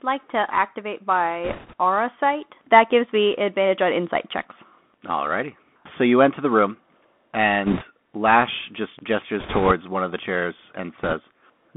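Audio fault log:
throughout: Bluetooth CVSD headset codec, speech confined to roughly 200 Hz to 3.5 kHz; the one-bit 64 kbps delta coder leaves granular hiss, scratchy s sounds and overloaded loud highs.
1.44–1.73 s: bit errors on a Bluetooth voice link, between "like to activate" and "aura sight"; flipped bits at about 3 percent add a rushing crackle, not clicks, since each bit carries little weight.
7.66–7.85 s: bit errors on a Bluetooth voice link, around 4 percent flipped bits, giving a brief crackly rush as small step errors pile up and then fade.
9.39–9.73 s: bit errors on a Bluetooth voice link, just before "one of the chairs"; about 4 percent errors produce rushing noise over the speech without loud clicks.
11.03–11.14 s: bit errors on a Bluetooth voice link, just after "one of the chairs"; a short burst near 3 percent leaves crackle that dies away quickly.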